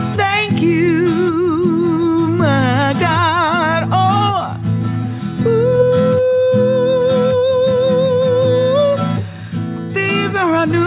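No audible technical faults.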